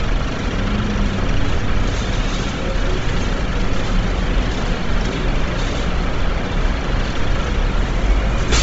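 From start to finish the sound is dull and grainy, with nothing above about 7.7 kHz. The likely cause is Bluetooth LC3 compression applied heavily, which fits a low bitrate near 24 kbps. The codec discards much of the upper spectrum and fills the gaps with noise, giving a breathy, hissy texture. A plain low-pass filter would leave the treble cleanly dull, and this noisy fill is what sets it apart. The codec ran with 7.5 ms frames.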